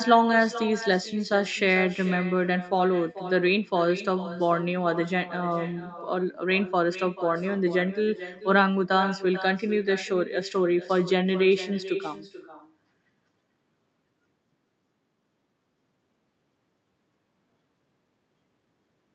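Throughout the speech, an echo with no canceller trails every phrase: the far end's loudspeaker feeds its microphone, and the sound returns after the network round trip, roughly 400 ms late and about 13 dB down. Unlike room reverberation, it is a distinct, thinner repeat rather than a smooth decaying tail.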